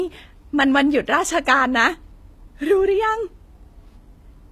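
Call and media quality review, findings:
Speech sounds thin, smeared and swirly for the whole clip, with the top end synthetic and no content above 18.4 kHz. Likely low-bitrate audio saved at a high bitrate: an earlier low-rate encode, consistent with HE-AAC near 24 kbit/s, re-wrapped as 320 kbit/s MP3. The large file cannot restore the detail the first codec stripped, so the original damage remains.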